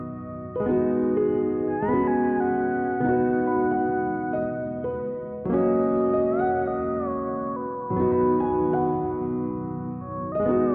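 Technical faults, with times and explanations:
Nothing stood out on listening; no technical faults were heard anywhere in the clip.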